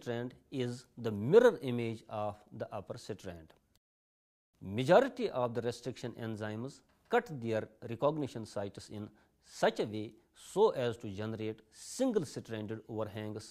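No dropouts, distortion, glitches or other technical faults are audible anywhere in the clip.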